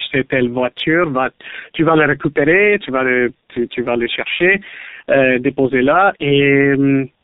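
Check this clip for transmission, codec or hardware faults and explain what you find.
One fault runs through the whole clip: tandem speech coding. The speech sounds rough, muffled and warbly, consistent with two low-rate speech codecs in series, likely AMR-NB and then G.723.1 with a G.711 link between them. The second coder re-encodes the first's already degraded output, so the errors compound. A spectrogram shows nothing above 3.8 kHz, with smeared, flickering formants.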